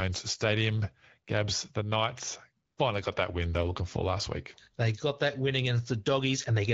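From 2.65 to 2.77 s, just before "finally got that win", AMR comfort noise replaces the real background with smooth synthetic hiss for 120 ms. Unlike a dropout, the gap is filled with noise rather than silence.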